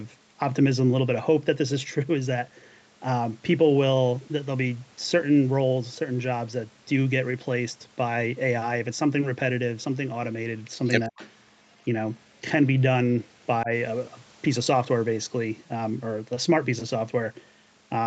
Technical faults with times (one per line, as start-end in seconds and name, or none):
11.08-11.20 speech suppressed in double talk
11.17-11.30 echo leak
13.63-13.71 speech suppressed in double talk